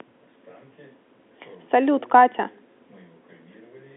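Nothing goes wrong anywhere in this bit of speech, which just has the narrow sound of an ordinary phone line from G.711 telephone coding, with the band running from about 250 Hz to 3.5 kHz and nothing above roughly 3.8 kHz.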